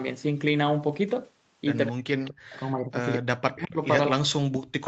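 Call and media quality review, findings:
Speech suppressed in double talk, 1.91 to 3.79 s and again 4.09 s to end. Speech dips up to about 40 dB over roughly 1.5 s in the first span. Likely the echo canceller's suppressor ducking near-end speech during overlapping talk. Unlike packet loss, there are no clicks or concealment artefacts, just level gating.

Echo leak, 2.25 to 2.31 s. A brief delayed copy of the voice, about 211 ms late and about 20 dB below the speech. Likely residual far-end echo escaping the canceller during overlap. It is a repeated copy, not a dropout, which separates it from the suppression around it.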